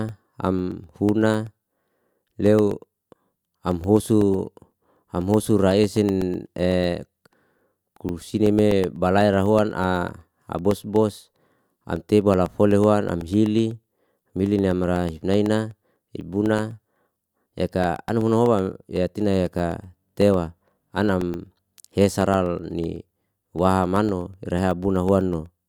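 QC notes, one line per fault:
0.09–25.58 s, periodic USB or driver dropouts: a brief gap of silence, around a millisecond, recurs every 0.125 s, eight times a second, heard as steady ticks during the speech. Unlike random clicks or crackle, the spacing never varies, and the ticks vanish in pauses.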